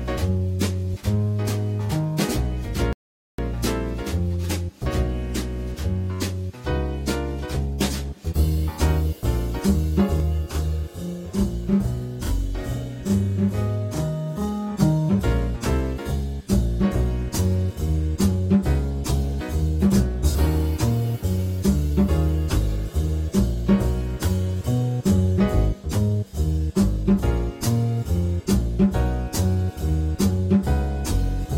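The player ran out of downloaded audio at 2.93 s, causing a rebuffering stall: the sound drops to silence until 3.39 s, then resumes exactly where it stopped, adding about 0.46 s. From 10.2 s to 14.8 s, a channel delay (doubling) holds one channel 40 ms late before the two are summed, so the audio is heard twice at equal level, as a close, thickened slap.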